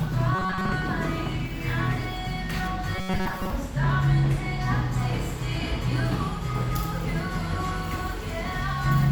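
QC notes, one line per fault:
0.35–0.73 s and 2.96–3.50 s, robotic sound from repeated short buffers: the sound becomes a rigid metallic buzz fixed at 188 Hz, most likely from a roughly 5.3 ms buffer replayed in place of most of the real audio. Unlike steady mains hum, it follows the sound's loudness contour and appears only in these bursts.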